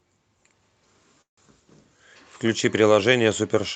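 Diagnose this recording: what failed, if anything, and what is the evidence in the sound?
A call audio freeze runs from 1.21 to 1.39 s, at the network and jitter-buffer stage. The speech does not break off cleanly. The receiver stretches the last sound into a brief fading fill that drops to near-silence for most of the gap. Speech then resumes where it stopped, with nothing audibly lost, but pushed about 160 ms later. The likely cause is packets held up in transit until the jitter buffer drained, beneath the band-limited Opus call sound.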